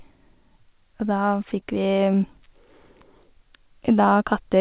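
At 1.60 to 1.62 s, short concealed packet loss: 20 ms never reached the decoder, and extending the previous sound left a brief smear instead of a dropout's silent gap.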